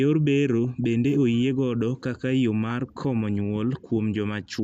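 Speech, with plainly audible MP2 compression throughout: the sound is dull and carries a gurgling, granular grain, consistent with a low MPEG Layer II rate near 80 kbps, where upper sub-bands drop out and remaining bands are coarsely quantised, likely from a digital radio chain. DAB burbling appears from 0.65 to 0.84 s and from 2.70 to 3.02 s. Residual bit errors, around 0.1 to 0.15 percent, corrupt samples, putting short blips of noise into single sub-bands.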